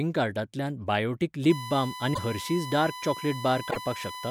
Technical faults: USB whine; broken MP3 bit reservoir

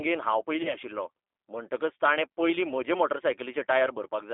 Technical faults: G.729 codec; VoIP packet loss concealed by the speech codec

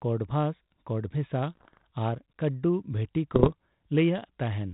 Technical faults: bit errors on an ADPCM link

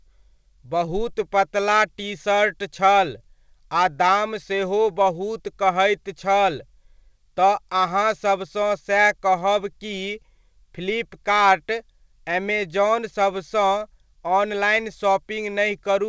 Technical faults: clock drift between sender and receiver; repeated timing corrections

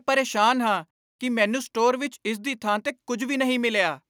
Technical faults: none

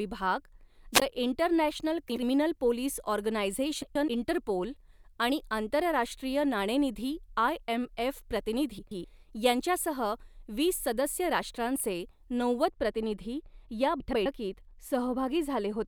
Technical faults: wireless microphone squelch dropout; frames out of order; de-emphasis applied wrongly

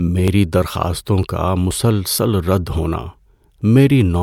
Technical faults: audio missing between chunks

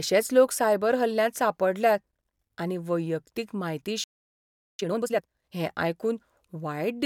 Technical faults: playback stall; time-compressed catch-up

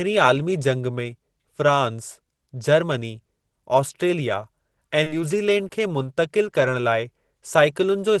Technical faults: short concealed packet loss; lost packet rebuilt from error correction

